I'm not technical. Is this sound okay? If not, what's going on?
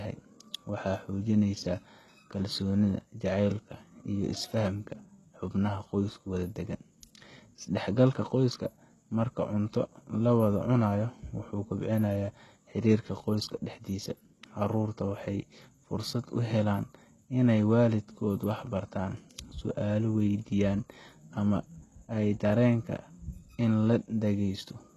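No, not quite. All the way through, the speech has a plainly gritty, metallic edge, and the s sounds come out lispy or smeared. That's most likely HE-AAC compression. To save space, it keeps only the lower part of the sound and fakes the treble by copying lower parts upward. So the top end still sounds bright but isn't the real thing, and nothing at all comes through above about 12.3 kHz.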